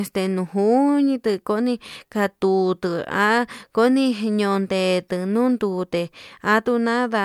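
Nothing in this recording trips a technical fault, so there's nothing here to pin to a moment or explain.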